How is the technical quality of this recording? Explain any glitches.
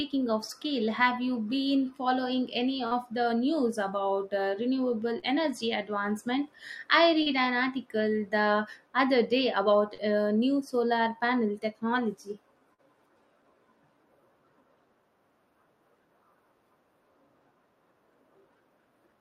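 The recording has five brief dropouts where the connection briefly failed.

Short concealed packet loss occurs at 2.87–2.94 s, 5.19–5.26 s, 7.23–7.29 s, 9.94–10.01 s and 12.74–12.81 s. Each time about 40 ms of the speech failed to arrive in time, and the receiver patched the gap by extending the preceding sound, pitched if voiced, noise-like if not, for roughly 33 to 43 ms before fading back into real audio. Each patch is heard as a quick smear or wobble, and a short consonant there may go missing.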